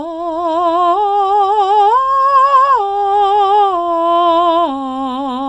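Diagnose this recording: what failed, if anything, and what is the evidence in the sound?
Nothing failed; no faults heard.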